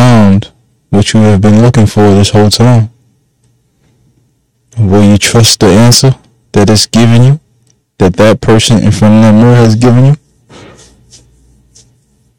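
From the first second to the last, the speech suffers hard clipping: the signal is pushed about 14 dB beyond what the stage can pass, so roughly a fifth of all samples are sliced off flat at the ceiling. Those squared-off peaks spray harmonics high into the spectrum, giving a harsh, buzzing fuzz on every loud syllable. Unlike soft saturation, which rounds peaks into a warmer thickening, this edge is abrupt and gritty.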